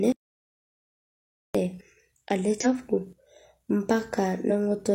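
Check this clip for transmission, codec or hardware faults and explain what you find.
Two kinds of fault are present in this speech recording: a long audio dropout to silence near the start, and two places where compressed frames were skipped.

From 0.12 s to 1.55 s the speech cuts off into dead silence for about 1.42 s, with no room tone underneath, and resumes mid-flow. This is likely an audio dropout to silence: the input was lost while the recorder kept writing silence, so that stretch of speech is gone.

At 2.60 s to 2.66 s and again at 4.46 s to 4.51 s, the speech lurches forward. Compressed frames were skipped there, dropping roughly a tenth of a second each time.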